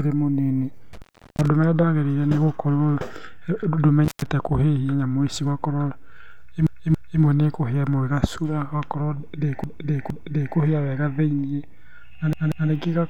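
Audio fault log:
0.93–1.48 s and 4.04–4.26 s, intermittent contact: a loose plug or cable briefly breaks the signal path, so the speech drops out for about 0.37 s and then 0.14 s, with crackle as contact breaks and returns and only faint hiss in between.
6.67–7.22 s, 9.64–10.57 s and 12.33–12.70 s, repeated frames: a block of compressed frames is decoded three times in a row, so 0.28 s, 0.46 s and 0.19 s of speech stutter, and the clip grows by 0.56 s, 0.93 s and 0.37 s.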